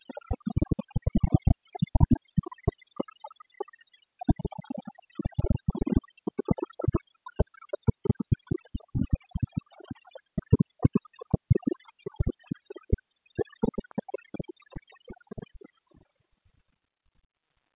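A recording of everyday sounds, and nothing technically wrong can be heard in it. There is no moment in the audio that needs a time or a cause attached.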